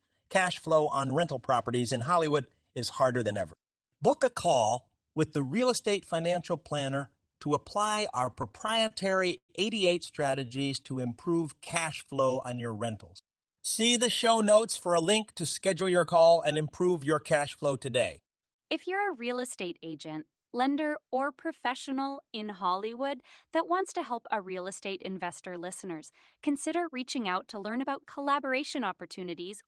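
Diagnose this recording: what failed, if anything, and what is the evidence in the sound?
Packets reached the receiver late or more slowly than they were played out, so its jitter buffer kept running dry between 8.25 and 9.51 s, producing repeated stalls (stutter). Thirteen times the receiver held and extended the last sound while it waited, filling 254 ms in all, about a fifth of that stretch, with the longest wait at 113 ms. No speech is lost, but the passage drags, catches and stutters.

Right after, between 10.23 and 11.74 s, the network delivered isolated packets too late or not at all, giving scattered short gaps. There are around ten of them, each roughly 15 ms or shorter, totalling about a tenth of a second, or some 7% of the span. Each hole was patched by continuing the preceding sound, so the speech stays clear but carries brief ticks and small hiccups.

The receiver's jitter buffer was short of reserve, so it performed a jitter buffer slow-down, repeating single pitch periods and slivers of pauses to stretch the playout. 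From 10.49 to 12.92 s it added 201 ms, and from 21.90 to 23.99 s it added 184 ms, both times playing at 92% speed. The pitch stays put while syllables and pauses are drawn out, giving a slightly sluggish delivery.

With too much audio queued, as happens when delayed packets arrive in a bunch, the receiver carried out a jitter buffer speed-up, cutting out short pieces of one or a few pitch periods. Between 14.89 and 18.75 s it runs at 106% and drops roughly 300 ms; between 25.88 and 28.61 s it runs at 107% and drops roughly 200 ms. The pitch is unchanged, but the speech sounds slightly hurried.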